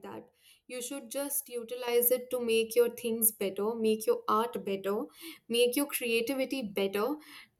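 It's a speech clip with a sudden gain jump at 1.88 s: voice and background noise both leap up about 8 dB and stay there, likely a gain change applied without any ramp.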